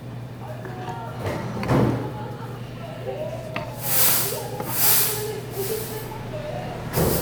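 Compressed frames skipped at 3.48 to 3.50 s: about seven frames of the encoded sound never reach the output, so the audio leaps ahead by around 150 ms.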